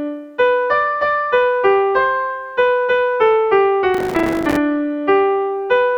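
From 3.95 to 4.57 s, processor overload crackle: the processor repeatedly failed to fill its buffers, which fits buffers of a few milliseconds each, leaving dozens of short silent gaps. It sounds like gritty tearing; the waveform shows rapid dropouts to near silence, the spectrogram dense vertical broadband streaks.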